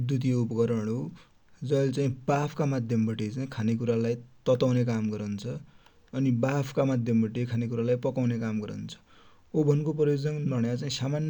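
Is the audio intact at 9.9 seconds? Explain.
Yes, the speech at 9.9 seconds is intact, with no dropout, click, distortion or other fault at that moment.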